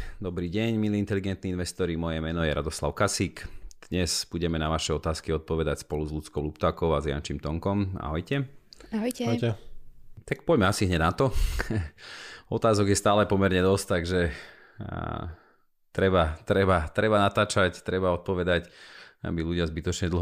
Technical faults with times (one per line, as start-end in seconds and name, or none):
none